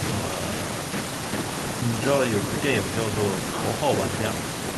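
A short speech recording with no audible technical faults anywhere in it.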